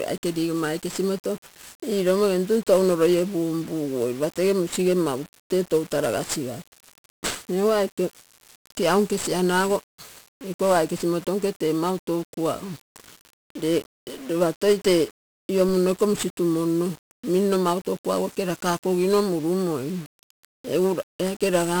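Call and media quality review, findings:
1-bit DFPWM compression across the full speech path: one bit per sample steering an adaptive level, which fits a 48 kbps stream. Heavy broadband quantisation noise, so speech sounds fuzzy and crackly throughout, with the treble buried under hiss.

DC step at 15.69 s: the waveform's zero line jumps abruptly, probably a converter recalibration or an offset input switching in. It is heard as a single low thump while speech continues unchanged. The offset then drains away quickly, consistent with a high-pass around 5 Hz.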